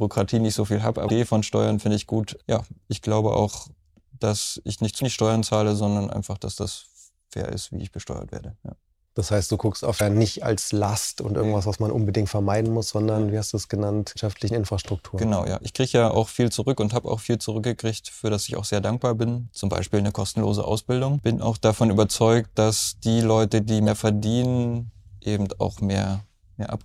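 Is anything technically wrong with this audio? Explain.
Yes. There is damaged data in the compressed stream, heard as five brief glitches at 1.06–1.10 s, 4.98–5.02 s, 9.97–10.01 s, 14.12–14.17 s and 23.84–23.88 s, each about 40 ms long. At each point, bytes in the encoded stream are corrupted, so the decoder misreads the affected frames, loses frame sync and has to hunt for the next valid header. That produces a short chirp, squawk, click or short hole in place of the intended audio.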